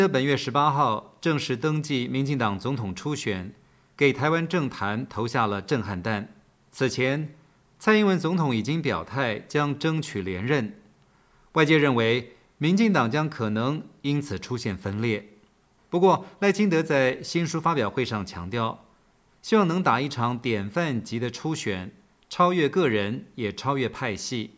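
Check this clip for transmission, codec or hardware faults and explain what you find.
Nothing stood out on listening; no transmission, codec or hardware problem could be heard anywhere in the audio.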